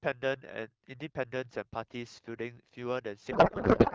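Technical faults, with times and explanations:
3.31 s to the end, codec payload misread: the speech gives way abruptly to garbled noise and warble that barely tracks it, because AMR frames packed octet-aligned are being unpacked as bandwidth-efficient, so every parameter is read from the wrong bits. Before this the AMR-WB stream at 12.65 kbit/s is clear. On a spectrogram, harmonic striations dissolve into smeared, erratic broadband energy.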